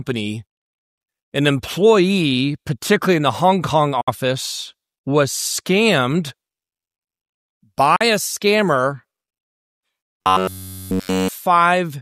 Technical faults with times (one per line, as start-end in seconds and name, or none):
4.01-4.08 Bluetooth dropout
7.96-8.01 Bluetooth dropout
10.22-11.28 robotic sound from repeated short buffers